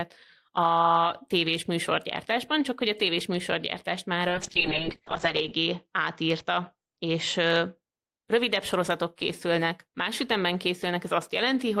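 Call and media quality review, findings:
Call bitrate drop, 4.28 to 7.87 s, after "a tévés műsorgyártást már", clearing by "rövidebb sorozatok készülnek más". Speech goes rough and muffled, top end cut from 20 kHz to 8 kHz. Fits the encoder starved from about 32 down to 7 kbps, bottoming out for 1.27 s.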